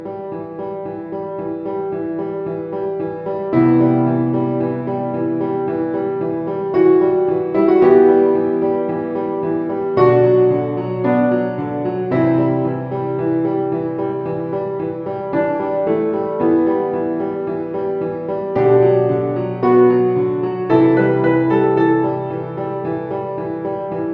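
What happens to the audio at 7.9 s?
Nothing goes wrong at 7.9 s; the audio plays through that point intact, with no dropout, click or distortion.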